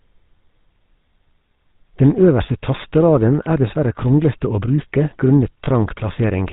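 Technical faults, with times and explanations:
throughout: GSM full-rate codec. Plainly audible coding damage gives the speech a buzzy, gravelly texture, consistent with a 13 kbps GSM full-rate stream. The codec models the vocal tract as a filter and excites it with a sparse pulse train, keeping only every third excitation sample, so fine voicing detail is replaced by a coarse, rasping buzz. Nothing above 4 kHz survives, which leaves the sound dull and narrowband, with no high-frequency sibilance or air.
5.64–5.67 s: lost GSM frames. A brief dropout is concealed by holding the parameters of the last good frame, heard as a short, rough, metallic smear where the sound should have continued to change. The gap is only a few hundredths of a second, which fits the loss of a single 20 ms frame, so the held sound does not fade to silence before normal decoding resumes.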